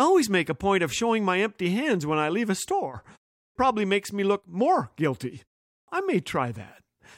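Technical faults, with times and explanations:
3.42 s and 5.74 s, clipped start after a pause: after silences of 0.33 s and 0.35 s following "I leave a store" and "me look more guilty", speech restarts abruptly, losing its first 134 ms and 139 ms while the output device wakes from sleep.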